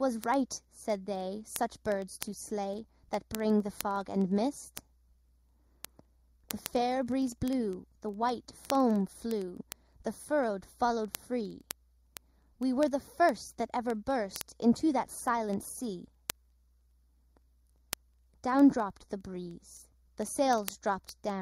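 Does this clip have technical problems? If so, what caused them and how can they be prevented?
Yes. Channel delay (comb filtering) runs throughout. One channel arrives about 0.2 ms late, and the two are summed to mono. Cancellation carves evenly spaced notches, the first near 3 kHz. The sound turns hollow and phasey. Align channels before any mono fold-down.

Word clock ticks run from 0.13 s to 21.40 s. Sharp ticks repeat roughly every 0.05 s, around 400 in all. Each marks a single sample dropped or repeated. This fits two unlocked clocks drifting about 400 ppm apart. Lock the receiver to the sender's clock.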